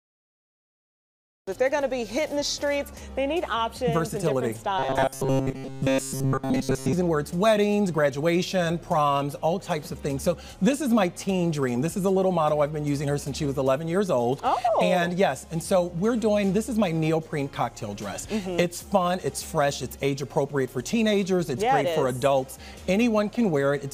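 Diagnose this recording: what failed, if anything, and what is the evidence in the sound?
Cut-off start at the recording stage: digital silence until 1.47 s, then the sound jumps in mid-stream with no attack, so capture began late.

Between 4.79 and 6.93 s there's a robotic sound from repeated short buffers, a rigid 134 Hz buzz, likely the driver or buffer looping about 7.5 ms chunks while most real audio is skipped.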